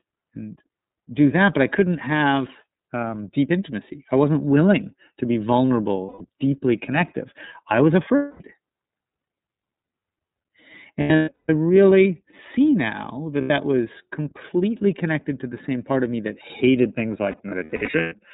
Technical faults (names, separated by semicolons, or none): iLBC codec; lost iLBC frames